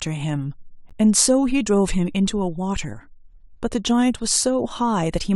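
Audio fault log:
0.89 s: gap between stream segments. A hard-edged hole of silence, about 12.5 ms long, cuts into the speech. The timing, close to one second in, fits a boundary between 1-second segments whose time stamps leave a small gap. The player fills it with silence. No audio is lost.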